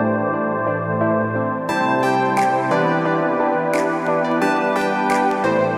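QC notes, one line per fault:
4.07 to 5.56 s, periodic USB or driver dropouts: about seven evenly spaced ticks, one every 0.25 s, heard only where there is signal. A recurring background task stalls the USB bus or audio driver, leaving a silent gap of a fraction of a millisecond each time.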